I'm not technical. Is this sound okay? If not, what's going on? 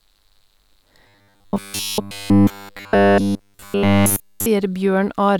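No. From 1.08 to 4.47 s the speech becomes a rigid, metallic buzz pitched at 100 Hz: robotic sound from repeated short buffers. All of that stretch is likely made of 10 ms chunks of audio replayed while fresh audio failed to arrive.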